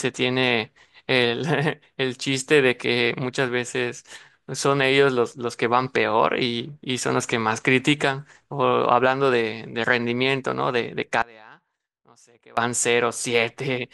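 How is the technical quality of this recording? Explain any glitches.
The recording has one clear glitch, an audio dropout to a faint residue in the speech near the end. From 11.22 to 12.57 s, about 1.35 s, the signal path likely lost the wanted feed while the chain after the break stayed live. The speech cuts out abruptly, leaving only a faint trace roughly 25 dB down, then snaps back.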